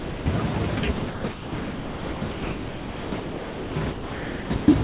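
Sound dropped by the voice detector, 0.0 to 0.26 s: the opening 260 ms of speech is missing, with steady synthetic noise in its place. The likely cause is the sender's voice detector treating the quiet start as background, so it stopped transmitting and the receiver filled the gap with comfort noise.

Sound chopped by the voice detector, 0.8 to 4.68 s: the speech breaks up repeatedly, with about 3.1 s of this stretch replaced by comfort noise, so syllables and word edges drop out. The likely cause is the detector switching transmission on and off more than once. Throughout, the audio has nothing above 4 kHz, which fits a narrowband G.711 call path.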